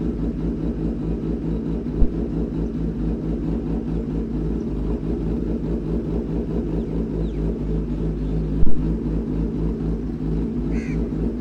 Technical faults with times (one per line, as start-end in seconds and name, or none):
2.02-2.09 phantom power thump
8.63-8.80 phantom power thump